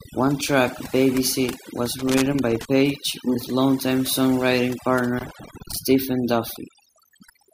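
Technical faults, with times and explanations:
Throughout: overdone noise removal. The background sits in near silence dotted with twinkling specks. A noise reducer set far too strong is pulling individual frequency bands down or out whenever they approach its noise estimate, taking the quieter parts of the voice along with the noise.
1.99 to 2.65 s and 5.18 to 5.77 s: loose connector crackle. Each is an irregular burst of scratchy crackling, the first ending just before "with longtime songwriting" and the second starting right after that phrase. A worn or dirty contact is rapidly making and breaking, chopping the signal into fragments.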